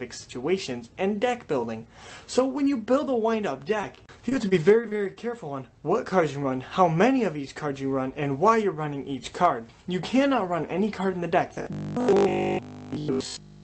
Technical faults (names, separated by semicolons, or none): repeated packet loss (robotic sound); robotic sound from repeated short buffers